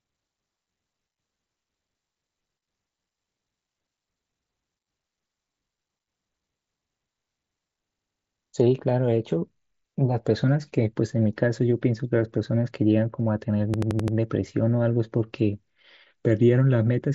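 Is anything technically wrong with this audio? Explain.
Yes, there's a system hang loop, twice: from 7.94 to 8.36 s and again from 13.74 to 14.17 s. The system stalled while the sound hardware kept replaying its ring buffer, so one 85.33 ms chunk repeats five times, which fits a 4096-sample buffer. At about 11.7 Hz that's a choppy machine-gun stutter. Through all of this, the wideband mSBC Bluetooth headset path carries the speech, with its top end stopping at 8 kHz.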